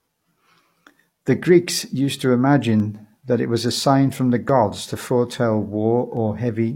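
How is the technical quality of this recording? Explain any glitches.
A recurring glitch marks the speech: clock drift buffer slips. From 1.11 s to 6.17 s, roughly four clicks land exactly every 1.69 s, likely from two clocks differing by about 100 ppm, each dropping or repeating a few samples. The strict regularity distinguishes them from random dropouts.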